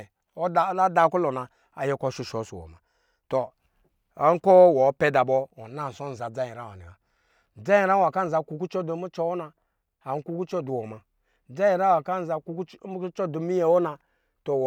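No technical faults can be heard anywhere in the speech. There is nothing in the audio that calls for a time mark or a fault description.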